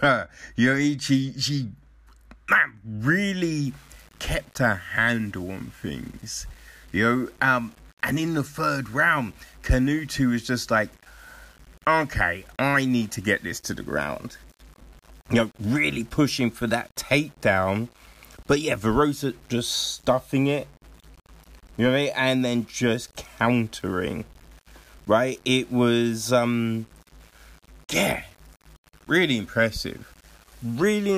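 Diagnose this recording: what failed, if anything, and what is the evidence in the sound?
The sample-format conversion stage has likely requantised the speech without dither. From 3.65 s to the end at 31.17 s, the speech carries a grainy, rasping distortion that tracks the signal, roughly 30 dB below it. It thickens on quiet syllables and sputters or drops out in the softest passages. That is low bit depth without dither, and it fits a 7-bit word with plain rounding, so the error follows the waveform rather than forming a steady noise floor.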